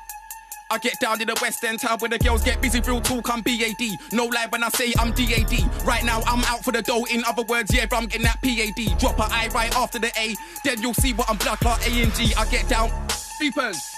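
Damaged data in a compressed stream at 8.11 s and again at 13.40 s: each time a short stretch of corrupted bytes makes the decoder misread its frames and lose sync, so it hunts for the next valid header, leaving a brief glitch in the sound.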